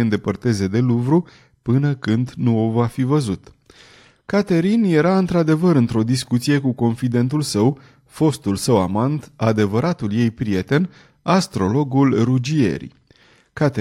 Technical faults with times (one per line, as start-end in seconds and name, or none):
none